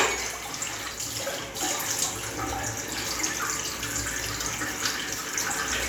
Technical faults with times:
none

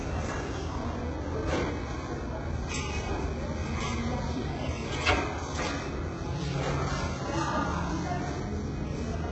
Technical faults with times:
0.00-9.31 HE-AAC compression

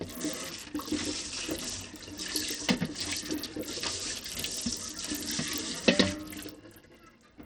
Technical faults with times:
0.00-7.46 Bluetooth SBC compression

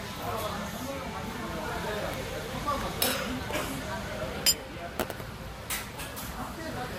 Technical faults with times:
0.00-6.98 transcoding between lossy codecs

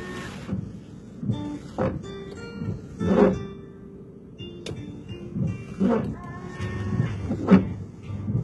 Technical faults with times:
0.00-8.43 HE-AAC compression

